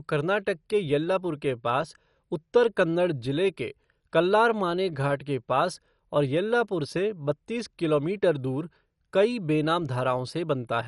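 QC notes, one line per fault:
Throughout, MP2 compression: the speech is dull, with nothing above 11.3 kHz and a gurgling, granular roughness, likely from a low-rate Layer II encode, around 48 kbps.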